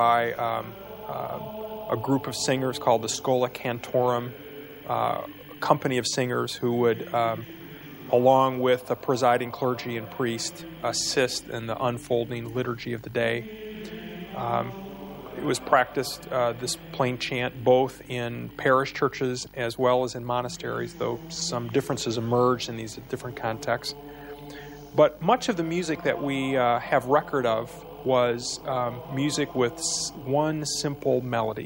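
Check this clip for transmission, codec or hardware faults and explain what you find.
No transmission, codec or hardware faults can be heard.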